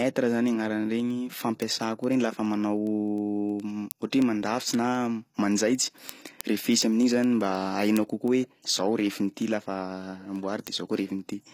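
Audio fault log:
Throughout: HE-AAC compression. The treble has a gritty, metallic edge, and s sounds turn lispy. Nothing comes through above 14.9 kHz. The likely cause is spectral band replication rebuilding the top end from copied lower bands, consistent with a low bitrate near 24 kbps.
0.17 to 11.50 s: word clock ticks. Sharp ticks recur about every 0.1 s, around a hundred in all, with uneven strength. The receiver runs on its own clock, drifting roughly 200 ppm, so a single sample slips each cycle.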